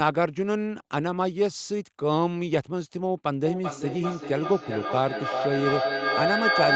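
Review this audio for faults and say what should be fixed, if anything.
A feedback howl starts at 3.45 s and runs to the end of the clip. Two devices in the same room are joined to the call, so the loudspeaker output is picked up again by the microphone and gains level on each round trip. The repeats build rather than decay and narrow onto a tone around 1.5 kHz, coming back roughly every 400 ms, the loop delay, and rising to about 2 dB above the speech, well inside the 8 kHz band the Opus path carries. To prevent it, mute or leave the second device, or use headphones, so the acoustic loop is broken.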